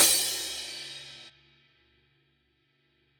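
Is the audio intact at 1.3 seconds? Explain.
No. Damaged data in the compressed stream hits from 1.28 to 1.30 s. The decoder misreads the corrupted frames and loses sync, leaving a brief chirp or blip.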